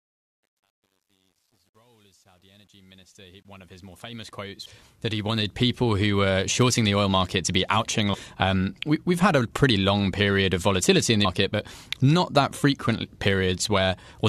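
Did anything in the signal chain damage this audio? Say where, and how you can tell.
Yes. Truncation distortion on a fade runs from 0.0 to 5.82 s during the fade-in and is harshest up to 4.33 s. A digital gain stage dropped low-order bits without dither, consistent with about a 10-bit word, so the quiet opening turns gritty.

Damaged data in a compressed stream appears as brief blips at 4.65 s, from 8.13 to 8.15 s, and at 11.24 s. Corrupted bytes in the coded stream made the decoder misread frames and lose sync until it locked onto the next header, leaving short glitches.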